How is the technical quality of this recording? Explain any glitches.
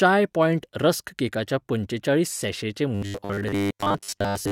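The recording breaks down near the end. From 2.95 s to 4.51 s, the close of the clip, the speech takes on a robotic sound from repeated short buffers. The audio turns into a rigid, metallic buzz pitched at 100 Hz that still loosely tracks the syllables. The likely cause is fresh audio arriving too late, so the playback repeats its last 10 ms buffer to fill each gap. Most of the real signal in that stretch is skipped, and the fixed repetition rate forces the steady 100 Hz tone.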